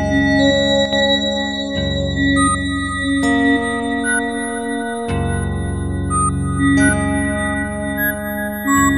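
From 0.86 to 0.93 s, one channel drops out, likely a stereo channel lost briefly, so the music dips abruptly by about 6 dB for 70 ms.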